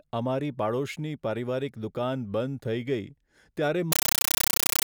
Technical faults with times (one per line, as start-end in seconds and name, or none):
3.92-4.87 compressed stream played as audio